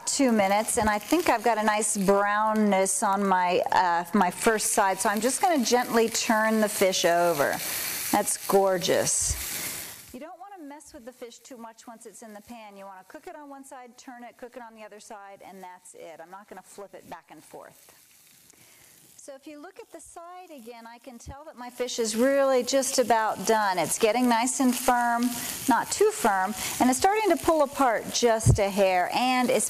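From 21.46 to 22.12 s a rapid ticking, like a zip being drawn, rides on the sound while its level moves by about 20 dB. This is zipper noise. The gain change was applied in coarse steps of about 2 dB, roughly twenty a second, with no smoothing between them, so each jump in level leaves a small click in the waveform. Across those 0.66 s, the clicks run together into the zipping texture.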